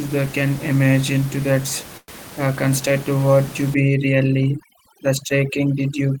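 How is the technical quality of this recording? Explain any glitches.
The recording has two clear faults: a short stall early on and heavy processing over the last stretch. Room noise sits about 17 dB below the speech.

The first fault is a call audio freeze, from 1.97 to 2.10 s. It comes right after "can imagine to that". The sound stops moving forward. The last moment is carried on as a fading buzz or hiss for about 107 ms, then ends in about 20 ms of silence. Speech resumes with "uh construct to what". The likely cause is delayed packets draining the receiver's jitter buffer. Nothing is lost. The pause is inserted, so everything after it plays about 107 ms later.

The second fault is overdone noise removal, from 3.74 s to the end of the clip. It begins just after "construct to what you". A noise reduction stage is set too aggressively for this background. Frequency bands close to its noise estimate are pushed down or removed, and soft parts of the voice are removed with them. 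The background drops and breaks up into twinkling specks.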